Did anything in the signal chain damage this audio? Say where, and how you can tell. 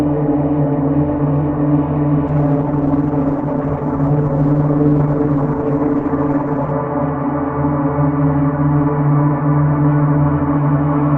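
Yes. A doubled audio track runs throughout: a full-band copy about as loud, roughly 0.4 s behind, with no decay or room colour, unlike an echo. A second capture path is likely.

From 2.29 to 6.79 s there is a call bitrate drop at the codec stage. The audio turns rough, watery and dull, which fits a fall from 64 to 12 kbps. Unlike packet loss, it has no gaps.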